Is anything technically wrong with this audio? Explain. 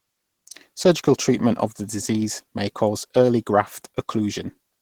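Yes. Throughout, the speech sounds muffled, hoarse and grainy, likely Opus compression at a low rate in hybrid speech mode, which fits roughly 16 kbps.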